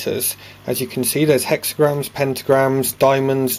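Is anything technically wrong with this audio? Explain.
No, nothing technically wrong turns up on listening; there are no audible faults to report.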